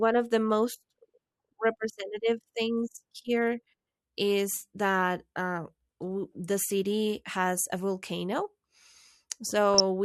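DAB burbling appears from 9.74 to 9.80 s, near the very end of the speech. Weak reception lets bit errors, at a rate of around 0.2 percent, slip past the error correction into the MP2 audio data, so corrupted samples put short blips of noise into individual sub-bands and corrupted scale factors make sub-bands leap in level for up to a frame. The span fits about three damaged frames, and it is heard as a brief burble laid over the speech.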